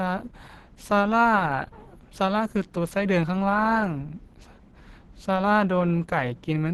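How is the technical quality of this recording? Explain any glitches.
Technical quality is compromised by one fault that runs through the whole clip.

Opus compression, throughout the clip: the sound is muffled and hoarse, with a rough, grainy texture to the speech. The likely cause is a low-rate Opus encode in the codec's hybrid speech mode, where a speech coder handles the lower band and a transform coder fills the upper band with approximated energy. The damage fits roughly 16 kbps, and nothing is present above about 18.6 kHz.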